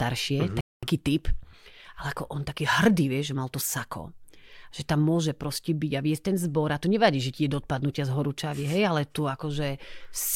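At 0.61 s the speech drops into silence and picks up exactly where it left off at 0.83 s. This rebuffering stall, where playback ran dry waiting for data, adds 221 ms.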